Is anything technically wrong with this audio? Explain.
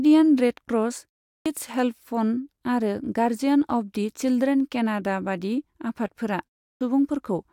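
Yes. There is a clipped start after a pause, heard twice. At 1.38 s, after a silence of 0.37 s, the speech returns with about 78 ms missing. At 6.73 s, after a 0.32 s pause, the same happens, again losing about 78 ms. The output device drops into a sleep state during silence and needs time to wake before it passes sound again. The first sounds after each pause are swallowed, so speech bursts in abruptly.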